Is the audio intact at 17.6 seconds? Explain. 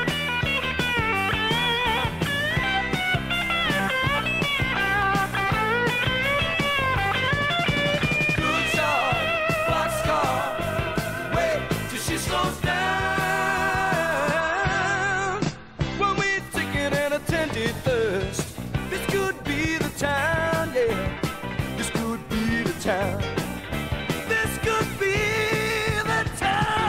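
No. At 17.61 s there is a single sharp click, the sound of dropped samples. The likely cause is that a tiny run of samples, well under a millisecond's worth, went missing, so the signal leaps straight from one value to a later one. Nothing audible is lost. The listener hears only the discontinuity. On a waveform it shows as an abrupt step in the trace. On a spectrogram it is a thin vertical line spanning the frequency range.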